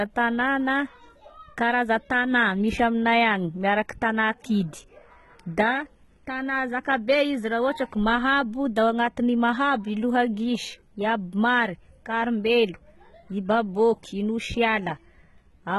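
From start to finish the speech carries heavy codec damage: the upper range sounds bright yet synthetic, with sibilants coming out gritty and lispy and nothing at all above 11.8 kHz. This is likely HE-AAC compression at a very low bitrate, on the order of 16 kbps. The treble is rebuilt by copying lower bands upward rather than coded directly, so harmonics fail to line up. Unlike a plain low-pass or bandwidth-starved MP3, the top end isn't dull or missing. It is present but false and metallic.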